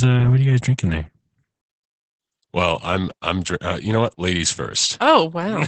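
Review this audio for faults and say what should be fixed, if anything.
The whole clip carries Opus voice compression: nothing above about 8.8 kHz, and the speech sounds hoarse and slightly robotic, which fits a low bitrate around 12 kbps. Export from the original source or encode at a higher bitrate.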